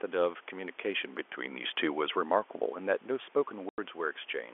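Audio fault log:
3.69–3.78 s, packet loss filled with silence: the speech drops out completely for 90 ms, which fits three consecutive 30 ms packets lost in transit, with the receiver playing digital silence in their place. The sound is cut off mid-waveform and restarts abruptly. On a waveform this appears as a flat, near-silent gap with sheer vertical walls. On a spectrogram it is a blank vertical stripe bordered by thin broadband lines at each edge.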